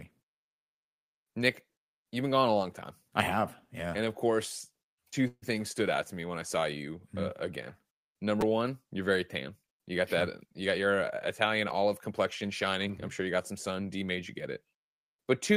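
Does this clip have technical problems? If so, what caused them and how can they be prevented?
Yes. At 5.27 to 5.44 s, between "of course two" and "things stood out to", a call audio freeze occurs, likely because packets were held up in transit and the jitter buffer ran dry. The receiver stretched the last sound across about 147 ms, ending in roughly 50 ms of silence, then resumed where it stopped, so nothing is lost but the speech is delayed. A larger or adaptive jitter buffer, plus prioritising voice traffic on the network, would absorb such delays.

A repeated buffer occurs at 8.41 s, just before "one you're very tan", and again at 11.70 s. New audio arrived too late and the device replayed its last short block, two extra times and then once, which fits a 256-sample buffer of about 5 ms. Each is heard as a brief click or buzz. Larger device buffers or higher scheduling priority for the audio thread would prevent the underruns.

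A jitter buffer speed-up runs from 10.65 to 12.43 s, after "got that you", and again from 12.85 to 13.80 s. With more audio buffered than its target, the receiver trimmed pitch-period slices to reduce the backlog, removing about a tenth of a second and then roughly 70 ms. The speech plays 5% and then 7% fast at unchanged pitch, sounding hurried. Steadier packet delivery would keep the buffer near its target so it needs no catching up.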